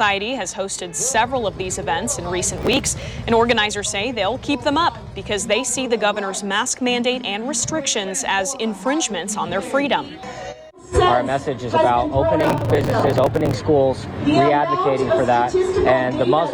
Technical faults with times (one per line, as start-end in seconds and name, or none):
2.58-3.05 processor overload crackle
12.41-13.55 processor overload crackle